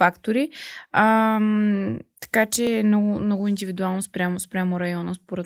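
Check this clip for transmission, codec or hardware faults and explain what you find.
One fault turns up in this speech, a single short discontinuity at about 2.67 s. It falls just before the words "е много много индивидуално". It is heard as a small jump in the sound. There is no gap of silence. The audio simply skips forward by a few milliseconds. This is likely a dropped buffer (overrun). Here the program failed to collect a block of samples before the hardware overwrote it. The audio on either side was then joined directly. The Opus voice compression leaves only light codec damage across the clip.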